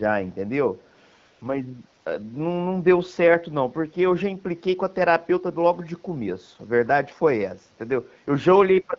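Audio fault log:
0.86–1.00 s, echo leak: an echo canceller on a loudspeaker end likely let part of the returning sound slip through, so a very faint copy trailing by 156 ms, roughly 40 dB below the main sound, briefly shadows it.
1.19–1.41 s, AMR comfort noise: the sender judged the line silent and stopped sending speech frames for 220 ms. The receiver filled the gap with synthetic noise built from a coarse level and spectrum estimate, so the real background drops out and a smooth, even hiss switches in.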